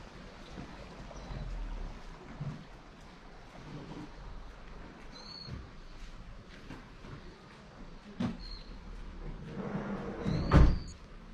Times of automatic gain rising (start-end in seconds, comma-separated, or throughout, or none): none